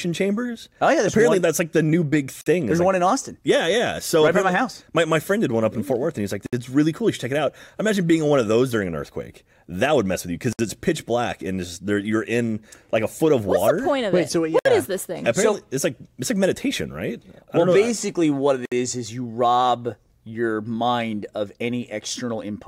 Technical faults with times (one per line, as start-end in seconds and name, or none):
2.41-2.46 gap at a join of encoded pieces
6.46-6.53 gap at a join of encoded pieces
10.53-10.59 gap at a join of encoded pieces
14.59-14.65 gap at a join of encoded pieces
18.65-18.72 gap at a join of encoded pieces